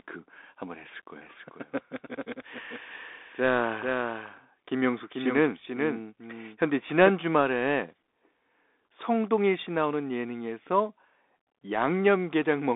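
From the first moment the speech sounds thin, boxed-in and gritty: sibilants turn scratchy, loud bright syllables crunch, and a fine granular hiss sits underneath. Nothing reaches above about 3.8 kHz, and the useful band runs roughly 250 Hz to 3.6 kHz. These traits point to the Bluetooth CVSD headset codec, whose one-bit up-or-down coding, consistent with a 64 kbps link, cannot follow fast high-energy changes and leaves that grainy noise floor throughout.

From 1.2 s to 7.1 s a second copy of the speech trails the first by a bit under half a second, a few decibels quieter, with no room decay of its own. It cuts in and out abruptly at those points. This is a doubled audio track, likely caused by the same signal being mixed in twice, once through a slower capture path or through an edit that left two offset copies overlapping.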